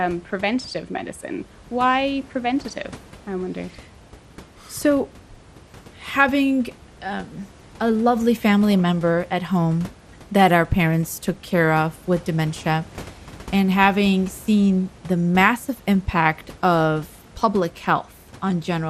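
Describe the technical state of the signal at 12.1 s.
At 12.1 s the speech has the dull, gurgling granularity of MP2 compression, which runs through the whole clip. Upper sub-bands flicker on and off and the remaining bands are coarsely quantised, likely from a low bitrate around 80 kbps. Unlike a plain low-pass filter, the top end comes and goes rather than being cleanly cut.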